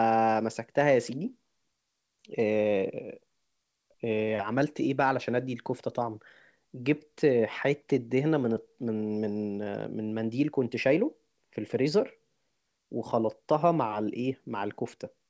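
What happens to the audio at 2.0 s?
Nothing goes wrong at 2.0 s: the speech carries on intact through the call path, with the usual band limit at 8 kHz and nothing breaking up at that moment.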